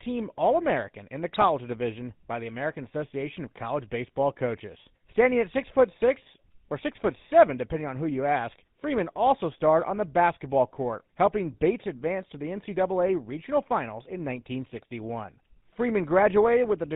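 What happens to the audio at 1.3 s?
Between "in the" and "division by the", from 1.28 to 1.44 s, the speech breaks up into squawks, pops and gargling. These are GSM bit errors: corrupted bits reach the decoder, and damaged filter, pitch or gain values bend the spectrum or throw the level around for each affected frame.

Underneath, as across the whole clip, the GSM full-rate codec leaves a plainly audible buzzy, gravelly roughness and nothing above 4 kHz. The decoder rebuilds speech from a vocal-tract model driven by sparse pulse excitation, which fits a 13 kbps full-rate stream.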